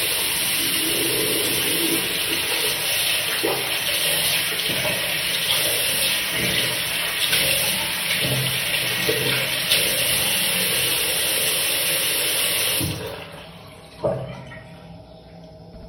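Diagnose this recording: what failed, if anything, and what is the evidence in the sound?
Dropped samples at 12.00 s: a single sharp click with a thin vertical line through the spectrum, and nothing audibly missing around it. The gap is only a fraction of a millisecond, a handful of samples, so the waveform jumps straight from one value to a later one and the step itself makes the click. The stage is likely the driver or buffer, where a brief hiccup in the sample stream can skip a few samples without interrupting the sound.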